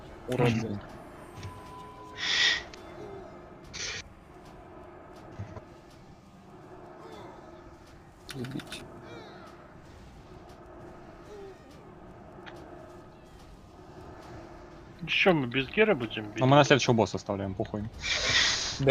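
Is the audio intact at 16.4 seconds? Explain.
Yes, at 16.4 s the audio is intact, with no dropout, click, distortion or other fault at that moment.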